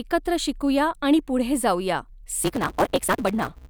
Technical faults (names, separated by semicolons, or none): block size mismatch (truncated)